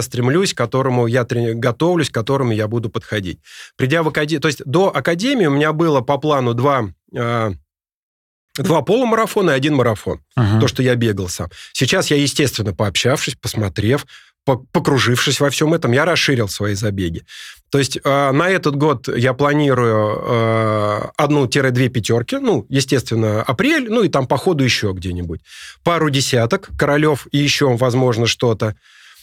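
At 16.77 to 16.79 s there is a case of chunks out of order. One 10 ms chunk of speech arrived late and plays one chunk after its proper place. Nothing is missing, but the swap creates three hard joins. It is heard as a brief jumbled moment.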